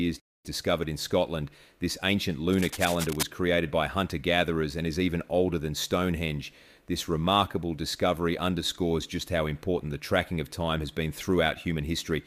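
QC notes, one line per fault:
2.51–3.23 s, cable scratch noise: a rough burst of rustling at about 10 dB below the speech, just before "created by hunter gatherers", likely a worn connector shifting.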